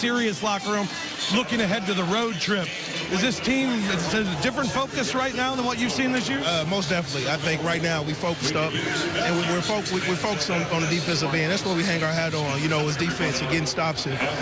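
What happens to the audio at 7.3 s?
Nothing goes wrong at 7.3 s; the audio plays through that moment intact, with no dropout, click or distortion.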